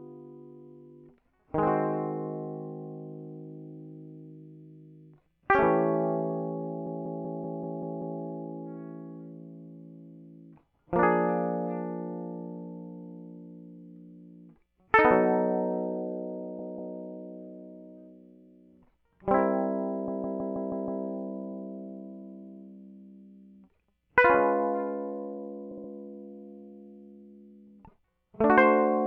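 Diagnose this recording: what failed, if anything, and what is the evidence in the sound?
Repeated frames at the codec or storage stage: the music stutters at 6.86–8.21 s, 16.59–16.98 s, 20.08–21.04 s and 25.71–25.90 s, looping 64–192 ms chunks of compressed data and stretching playback.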